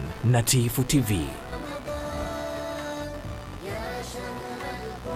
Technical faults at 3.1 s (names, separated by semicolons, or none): computer activity noise